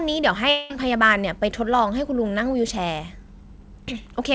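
From 0.50 to 0.72 s the speech stops and a buzzy, fading continuation of the last sound fills the gap, likely a long network dropout that the receiver concealed. About 0.2 s never arrives. On a spectrogram, flat smeared harmonics dim before speech resumes abruptly, all below 8 kHz.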